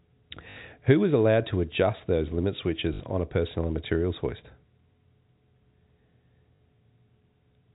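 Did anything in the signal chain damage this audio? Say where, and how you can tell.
Yes. Packet loss with last packet repeated, at 0.50–0.56 s, 2.94–3.00 s (between "to adjust those limit" and "on a personal and") and 6.56–6.60 s. At the network stage, the receiver replayed the last packet, giving a 50 Hz robotic stutter that fits 20 ms packets.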